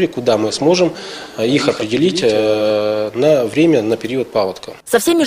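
From about 1.20 s to 2.70 s there's a doubled audio track: a second, dry copy trailing roughly a tenth of a second behind, around 10 dB quieter, likely from a slower capture path. It cuts in and out abruptly, giving a slappy echo.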